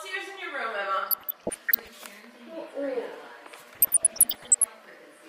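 Weak DAB reception let bit errors slip past the error correction into the MP2 audio data, producing DAB burbling twice: from 1.02 to 1.97 s, with an error rate around half a percent, and from 3.75 to 4.66 s, around one percent. Corrupted samples put short blips of noise in single sub-bands and corrupted scale factors make sub-bands jump in level for up to a frame, so the audio burbles, the second stretch sounding the heavier of the two.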